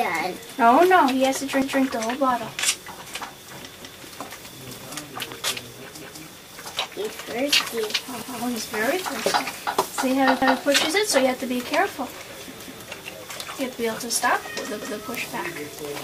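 Overlapping chunks cause a stutter at 1.62, 3.82, 6.02, 8.22, 10.42, 12.62 and 14.82 s. Each 2-second chunk replays the previous chunk's last 200 ms.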